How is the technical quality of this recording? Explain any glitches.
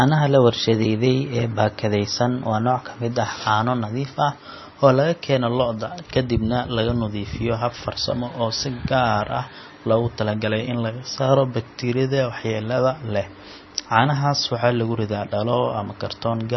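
The recording is heavily degraded from start to finish. Throughout, the speech sounds dull and watery, with nothing above 5.9 kHz, so s sounds lose their edge, and a swirling, warbling texture hangs over everything. The likely cause is MP3 compression at a very low bitrate, something near 25 kbps. Starved of bits, the encoder chopped the treble at a fixed cutoff and zeroed faint frequency lines, which flicker on and off between frames to produce that swirl.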